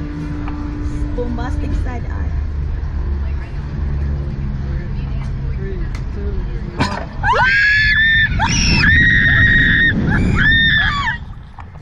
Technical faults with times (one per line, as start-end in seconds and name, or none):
1.16 compressed frames skipped
2.67 compressed frames skipped